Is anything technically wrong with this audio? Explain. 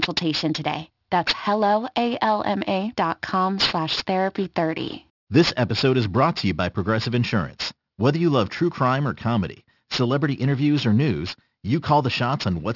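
Yes. Throughout the speech, sibilants sound gritty and metallic, with harsh tones that don't belong to the voice. This is aliasing: the audio was downsampled, pointing to a rate of about 12 kHz, without low-pass filtering, so content above 6 kHz folds back into the band, roughly 10 dB below the signal.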